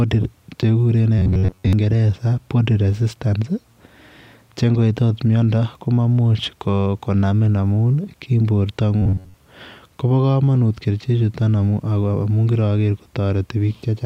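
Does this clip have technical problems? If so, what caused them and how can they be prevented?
Yes. Robotic sound from repeated short buffers, at 1.19 to 1.73 s and 9.02 to 9.34 s: a metallic buzz near 94 Hz, likely from one 10.7 ms buffer looping while most real speech was skipped. A larger jitter buffer or more processing headroom keeps fresh audio arriving on time.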